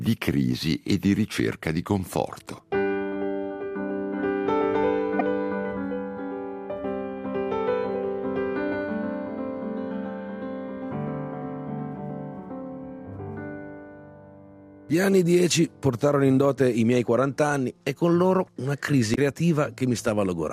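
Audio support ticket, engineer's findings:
Sample clock jitter throughout. Faint hiss and roughness riding on the signal, gone in silent gaps. Worse on loud, bright passages. Probable component: converter clock. Sampling instants wander by under a microsecond. The error tracks waveform slope and sits around 50 dB below signal.

Damaged data in a compressed stream at 5.19–5.21 s. Short glitch. Decoder misreads corrupt frames and resyncs on the next header. Second event at 19.12–19.18 s. Same blip, longer. Probable component: stream or file transport upstream of decoder.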